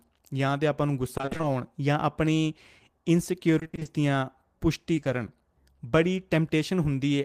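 From 1.17 to 1.45 s, and again from 3.59 to 3.87 s, the sound turns choppy and robotic. This is repeated packet loss. Holes of up to 20 ms follow one another quickly, which fits a run of lost 20 ms packets, and each is patched by continuing the sound just before it. About half of each stretch is this patching, so the rhythm of artificial filler sets it apart from a single dropout.

Around 4.95 to 5.07 s comes short concealed packet loss, three brief events at 4.95–4.99, 4.99–5.03 and 5.03–5.07 s. Each replaces 20 ms of missing audio with a continuation of the preceding sound before blending back in, heard as a small smear or wobble. Unlike the earlier robotic stretches, these are three adjacent short events of 20 ms of filler each.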